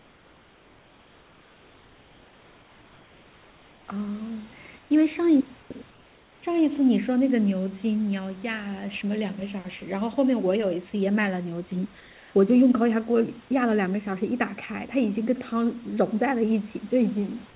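Comfort noise in place of the background at 0.0–3.89 s, 4.79–4.91 s, 5.63–5.71 s and 12.01–12.35 s: the room noise between phrases becomes a steady, featureless hiss about 2–3 dB quieter, likely from discontinuous transmission on the call path, which passes nothing above 4 kHz.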